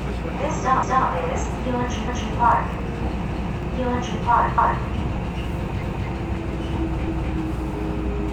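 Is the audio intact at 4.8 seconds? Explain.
No. At 4.8 seconds the audio is inside an overlapping chunks fault that runs from about 4.58 to 4.83 s. The sound appears to be handled in 1-second chunks, and here a new chunk begins before the previous one has finished. So a 250 ms stretch of audio plays a second time at the join. It is heard as a stutter, with a click where the repeated piece cuts in.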